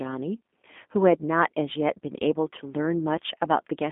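From start to end, the speech carries G.729 codec damage, and it is plainly audible. The codec rebuilds each 10 ms frame from a vocal tract filter, a pitch predictor and a few pulses. The sound points to its 8 kbit/s rate. Nothing survives above 3.7 kHz, and the band sits roughly between 200 Hz and 3.5 kHz. The speech sounds narrow, slightly rough and synthetic.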